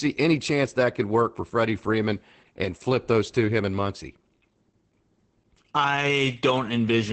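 From start to finish the speech carries Opus voice compression artefacts. Nothing is left above about 8.5 kHz, and the SILK-style coarse excitation makes it sound muffled, a bit hoarse and faintly robotic. The damage is plainly audible and points to a low bitrate, around 12 kbps.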